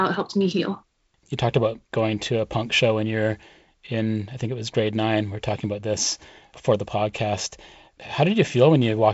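Nothing stood out on listening to this speech, which comes through G.722 wideband telephone coding with nothing above 7.7 kHz.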